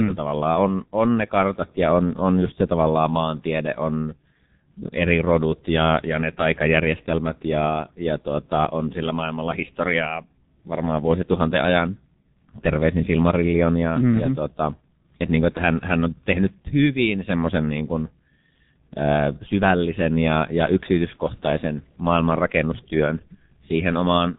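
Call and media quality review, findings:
G.723.1 codec, throughout: speech muffled and hoarse, consonants smeared, nothing above 3.8 kHz. Slow 30 ms frame model updates; heavy damage fits roughly 6.3 kbit/s.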